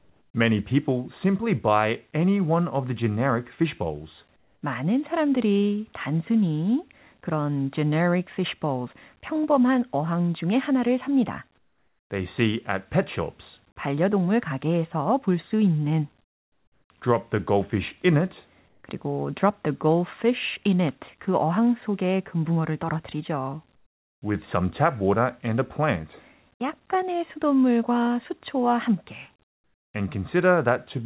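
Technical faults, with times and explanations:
0–0.34, 4.36–4.62, 11.58–12.1, 16.22–16.9, 18.68–18.84, 23.76–24.22 and 29.44–29.94 s, comfort noise in place of the background: In each pause the real room tone drops out and a flat, featureless hiss takes over, between about 3 and 17 dB quieter, until speech resumes. The culprit is likely discontinuous transmission: the sender goes silent in pauses and the receiver fills the gap with synthetic noise. The detail is missing because the fill only roughly matches the original background's shape.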